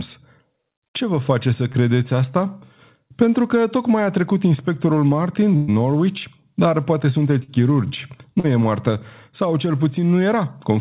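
At 1.72 s, just after "vă face să", about 20 ms of packets arrived too late for the decoder. This is short concealed packet loss: the receiver extended the preceding sound to cover the hole, leaving a brief smear before the real audio blends back in.

From 5.56 to 5.70 s a burst of packet loss took out about 120 ms. The receiver kept continuing the last sound and let it fade across the gap, so a held, dimming buzz or hiss replaces that stretch and the audio resumes further on.

The same short concealed packet loss returns at 7.44 s, after "dar poate", this time covering about 40 ms, so the smear is longer. It recurs at 8.40 s, roughly 40 ms, right before "e moartă". These patches all sit inside a call-codec band that stops at 4 kHz, which fits G.711 mu-law at 64 kbps.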